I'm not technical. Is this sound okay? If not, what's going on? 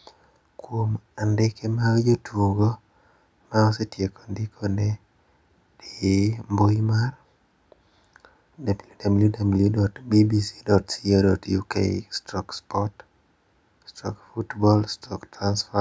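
Yes, this sound is okay; it just went through the usual microphone processing of a call.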